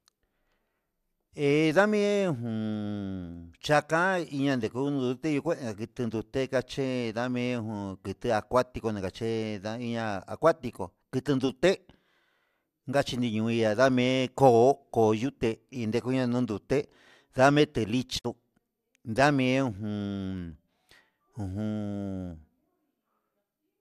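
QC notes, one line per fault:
18.17–18.26 s, digital broadcast dropout: the receiver stopped getting usable frames, most likely because a short run failed their checksum, so it muted rather than decode damaged data. Right after "indekuña ndonduté ndame te" the speech fades out over about 20 ms and drops into a brief hole. Roughly 48 ms of programme is missing, which fits two lost frames. The speech then picks up later in the stream, and nothing sent during the gap can be recovered.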